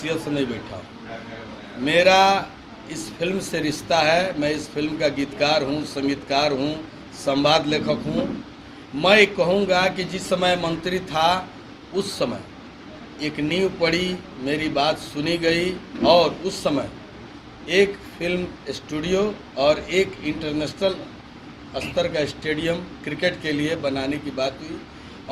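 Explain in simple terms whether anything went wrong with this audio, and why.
Nothing went wrong with this recording that a careful listener can hear. There is no moment where the sound breaks, stumbles or changes in a way it shouldn't.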